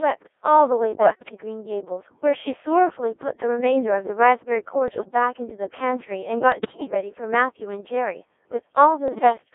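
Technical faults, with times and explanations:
Throughout: Codec 2 vocoder. The speech has a robotic, buzzy quality, held in a narrow band of about 300 Hz to 3.5 kHz. The damage is heavy. The decoder does not rebuild the original waveform. The codec sends only pitch, voicing, energy and a rough spectral envelope, and the decoder then rebuilds the voice from sine waves. At 1.6 kbit/s that leaves little detail. So the voice sounds synthetic and smeared, and the texture of natural speech is lost.
1.00 to 1.32 s, 4.88 to 5.08 s, 6.52 to 6.94 s, 9.08 to 9.38 s: bit errors on digital voice radio. In these four bursts the synthetic voice lurches in pitch, loudness and tone colour. It breaks into bleeps, warbles and garbled robotic sounds. The longest and worst burst is at 6.52 s. The stream is so compressed that each bit sets part of a whole frame's parameters. One flipped bit can therefore throw a frame's pitch or spectrum far off, as happens with a weak radio signal.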